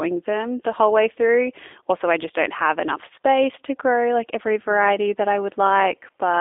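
The clip is speech carried through a G.729 codec for its whole length, and the damage is plainly audible: the voice sounds slightly rough, buzzy and synthetic, as if rebuilt from a vocal tract model and a few pulses rather than the original waveform, which fits 8 kbit/s VoIP coding. A spectrogram shows a hard ceiling near 3.6 kHz and little below 300 Hz, with smeared, blocky harmonics in between.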